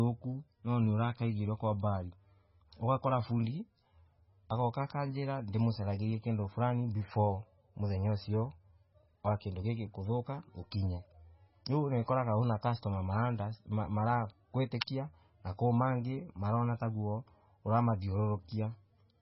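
Throughout the recording the speech sounds dull and watery, with nothing above 5.6 kHz and a swirling, chirpy texture on sibilants. The likely cause is heavy MP3 compression at a bitrate that fits roughly 16 kbps, where the encoder cuts the treble and drops weak frequency lines that flicker between frames. At 14.80 s a hiss of about 12 ms runs just ahead of a sharp attack, which then lands softened. This is pre-echo: the codec spread its quantisation noise across the whole block, so noise meant for the loud onset leaked into the quiet moment before it.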